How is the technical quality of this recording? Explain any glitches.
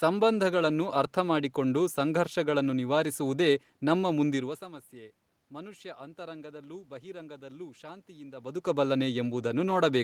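The signal shows no technical glitches: the background noise of the room and the level changes just before halfway and again near the end, where the talker shifts relative to the microphone, belong to the recorded scene rather than to anything the recording chain did.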